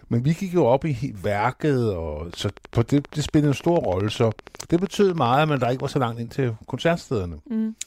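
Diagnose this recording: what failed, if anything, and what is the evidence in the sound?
A train of clicks runs from 2.34 s, after "op i værket og", to 5.97 s, before "langt ind til". Around fifty identical ticks arrive at a steady 12.7 per second, peaking a few dB above the speech and persisting through pauses. The likely cause is interference coupling into the analogue wiring.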